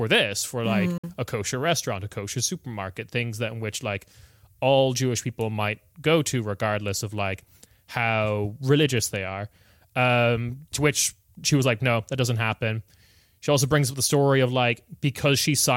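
At about 0.98 s, just after "this for like", the speech cuts to silence for roughly 53 ms and resumes at 1.04 s on "a kosher restaurant a". The speech picks up further along, as though it kept running through the hole rather than pausing. This is most likely a Bluetooth dropout: packets arrived too late for the headphones and were discarded, and a gap of this length fits about four lost packets.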